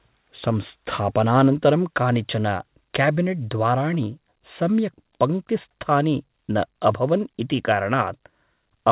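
Nothing stood out on listening to this speech, which carries the narrow telephone-band sound of a call path with no content above 4 kHz.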